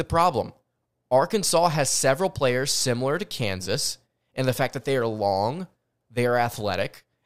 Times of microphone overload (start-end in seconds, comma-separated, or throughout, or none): none